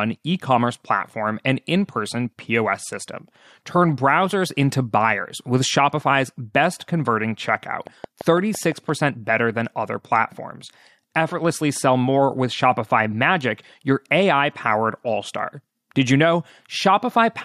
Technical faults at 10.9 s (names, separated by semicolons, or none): none